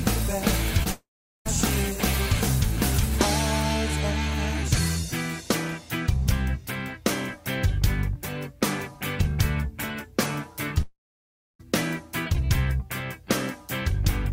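Right near the start, around 0.83 to 0.88 s, there's a short concealed packet loss: about 20 ms of audio never made it, and the receiver papered over it by stretching the preceding sound, so you get a quick smear or wobble rather than a clean gap. Straight after, from 0.91 to 1.47 s, and again from 10.82 to 11.61 s, the audio carries on briefly as a fading buzz or hiss and then goes silent for about 0.4 s and about 0.63 s respectively, before picking up further along with roughly 0.54 s and 0.78 s simply gone. That's most likely a long network dropout each time, with concealment giving up and the missing stretch never replayed.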